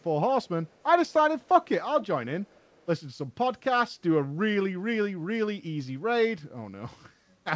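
Faint echo leak runs through the first three seconds. It appears at 0.00, 0.43, 0.67 to 0.83, 1.08, 1.40, 2.01 and 2.40 to 2.86 s. Each time, a delayed copy of the speech trails the original by 399 ms. Most scraps sit far below the voice, around 35 to 40 dB down. The one at 2.01 s is louder, about 20 dB down. The likely cause is a loudspeaker on the far side whose echo canceller let part of its microphone pickup return. Above 8 kHz the audio is empty, which fits a wideband call codec.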